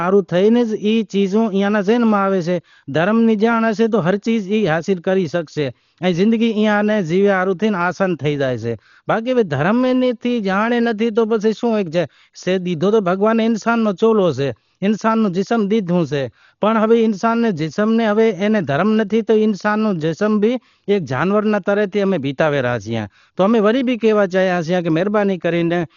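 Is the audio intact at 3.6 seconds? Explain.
No. At 3.6 seconds the speech carries heavy damage that runs through the whole clip, likely Dolby Digital compression at a very low bitrate, around 40 kbps. The encoder cuts everything above 6.9 kHz and leaves many frequency lines unfunded, so the decoder fills them with noise, making the sound dull with a rough, fluttering grain.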